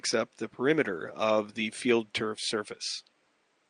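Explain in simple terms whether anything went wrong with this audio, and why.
Nothing went wrong here.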